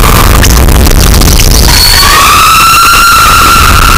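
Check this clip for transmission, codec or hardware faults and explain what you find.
There is one fault, present throughout the clip: a float read as integer. The waveform sits near-square at an almost fixed, high level, very loud and harsh, with background noise as loud as the foreground sound, though pitch remains traceable. The likely cause is 32-bit float samples interpreted as 32-bit integers, so sign and exponent bits dominate each value.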